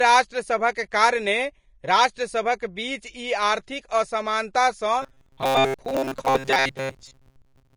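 Throughout the speech, a hissy, grainy texture with roughened tones and smeared consonant attacks points to low-bitrate Vorbis compression as the likely cause, at a rate that fits roughly 30 kbps. A spectrogram shows a lowered cut-off, with blotchy, noise-like patches replacing fine treble detail.

From 5.02 s to 7.76 s, the speech turns into a rigid metallic buzz at 134 Hz. The likely cause is repeated short buffers: a slice about 7.5 ms long is replayed in place of most of the real audio. On the waveform this appears as identical copies stamped out at a fixed spacing, and the spectrogram shows evenly spaced harmonic lines.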